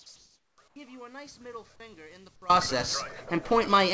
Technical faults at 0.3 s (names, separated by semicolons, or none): audio dropout to a faint residue; comfort noise in place of the background